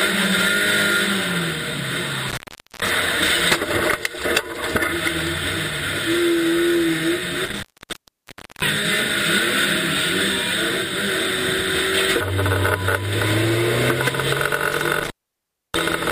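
The sound cuts out with crackling edges at 2.29–2.90 s, 7.45–8.62 s and 14.72–16.11 s, going dead for 0.45, 0.99 and 0.64 s. This is intermittent contact, where a loose cable or plug briefly opens the signal line.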